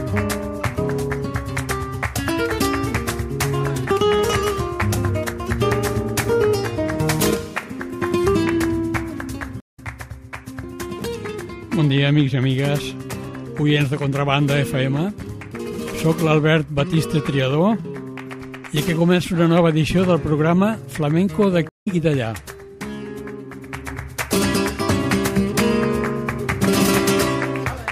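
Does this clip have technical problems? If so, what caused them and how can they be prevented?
Yes. A stream reconnect occurs at 9.60 to 9.80 s and again at 21.69 to 21.88 s. Each time the connection dropped, the audio went silent for 150 ms and then 144 ms, and a fresh decoder restarted mid-stream, resuming roughly 150 ms further on, so a short stretch of sound is skipped. Prevent it with a stable network path and a larger client buffer that rides out brief connection drops without rebuilding the decoder.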